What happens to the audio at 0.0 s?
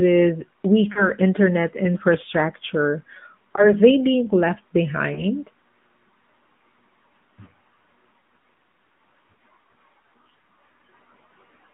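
From 0.0 s the speech already carries AMR narrowband mobile codec damage, and it persists through the whole clip. The signal is squeezed into a telephone band of roughly 150 Hz to 3.5 kHz, with nothing above that. The codec rebuilds speech from a vocal-tract model excited by sparse pulses in 20 ms frames, giving a plainly audible buzzy, synthetic edge that fits a mid-rate mode near 10.2 kbps.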